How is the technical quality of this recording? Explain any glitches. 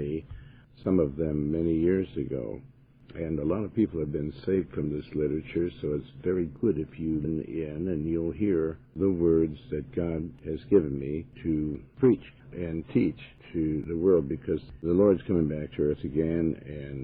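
One glitch mars the recording. At 7.20 to 7.25 s, damaged compressed-stream data makes the decoder misread frames and resync, causing a brief disruption.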